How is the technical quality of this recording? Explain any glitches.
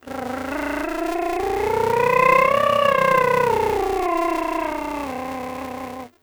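The music carries a steady buzz from start to finish. That's a filter restarted on every block: its memory resets each time, so every block kicks off with a small transient. They repeat at 345 Hz, which fits a 128-sample block, and the buzz rises and falls with the music's level.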